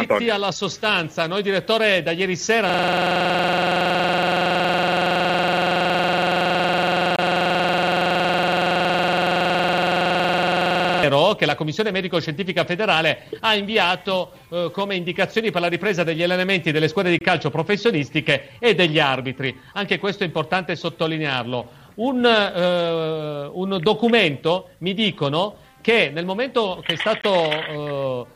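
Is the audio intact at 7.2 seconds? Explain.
No. From 2.69 to 11.03 s a system hang loop traps playback: the frozen computer leaves the hardware replaying one 46.44 ms stretch, which fits a 2048-sample buffer, so 7.2 s falls inside a rough 21.5 Hz buzzing stutter. Within that loop, a gap between chunks at 7.16 to 7.19 s drops in a 25 ms hole where one stored chunk ends and the next begins.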